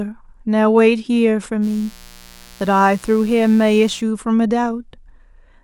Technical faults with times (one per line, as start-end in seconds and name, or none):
1.61-4.03 mains buzz